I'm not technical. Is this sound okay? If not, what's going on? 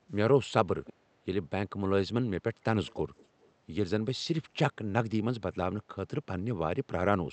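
No. There is an echo leak. Someone on the call was most likely listening on a loudspeaker, and their phone or computer didn't fully filter its own speaker out of its microphone, so some of the speech was sent back. You hear a faint, delayed copy of the voice trailing about 0.3 seconds behind, in short scraps at 0.85 to 0.93 seconds, 2.87 to 3.01 seconds and 3.17 to 3.5 seconds, loudest in the second one.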